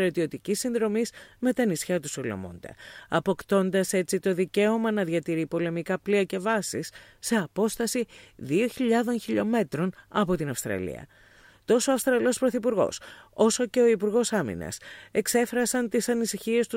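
No technical faults can be heard anywhere in this clip.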